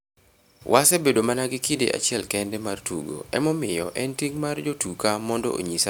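Nothing in this speech recording stands out as a technical fault, with no dropouts, glitches or other problems turning up anywhere along the way.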